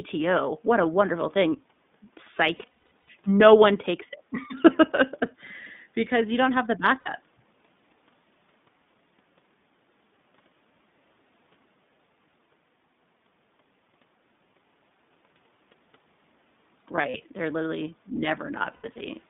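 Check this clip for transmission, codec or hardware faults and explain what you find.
Two faults are present: the whole clip passes through the iLBC codec, and in four places iLBC frames are lost in transmission.

iLBC codec, throughout: The speech was coded by the narrowband iLBC codec at a rate that fits its 15.2 kbps mode with 20 ms frames. Each frame's excitation is coded on its own, and the line band runs only from about 150 Hz to 3.6 kHz. As a result the speech is dull and boxy, with no air or sibilant detail above 3.6 kHz. The coding damage is plainly audible as a rough, slightly synthetic grain on the voice.

Lost iLBC frames, at 2.56–3.10 s, 7.00–7.09 s, 16.96–17.24 s and 18.72–19.02 s: Packets went missing, and the decoder filled each hole by repeating the last pitch cycle blended with noise. Longer gaps fade as they go. The first burst comes just before "no one takes". It drops about 360 ms of audio in gaps scattered over roughly half a second, the longest around 70 ms. 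The 60 ms loss at 7.00 s follows "you don't have the". The burst at 16.96 s, just before "they're literally", removes 120 ms across 280 ms, the longest run around 40 ms. The last burst loses 180 ms across 280 ms, including one run of about 100 ms. Each gap sounds like a held, buzzy or breathy vowel. Because iLBC frames stand alone, the voice snaps back to normal almost immediately after each one.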